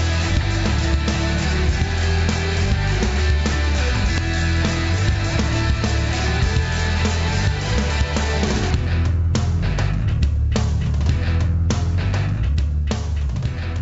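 There are no technical faults to describe, and the call path sounds as expected for a wideband G.722 link, with nothing above 8 kHz.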